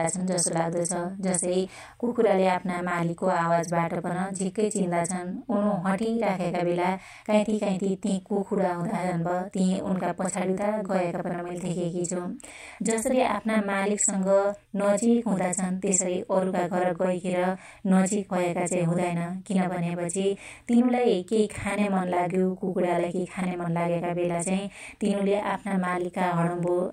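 From start to finish the speech carries a channel delay (doubling). One channel arrives about 42.7 ms behind the other, a lag that fits a 2048-sample buffer at 48 kHz. Once the two are folded to mono, that late copy is too far behind to fuse with the original. Every syllable is followed by a distinct slap at the same level, so the speech sounds doubled.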